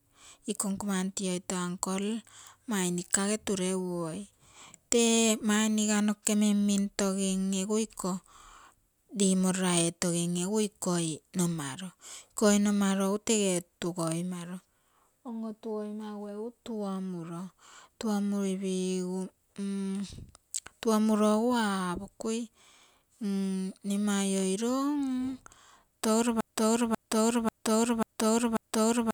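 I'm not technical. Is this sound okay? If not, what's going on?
No. From 26.41 s to the very end, the speech gets stuck in a broken-record loop: the same half-second snippet (about 0.54 s) plays five times back to back, identical each time rather than fading like an echo. What should have been said there is missing, likely because playback or streaming stalled.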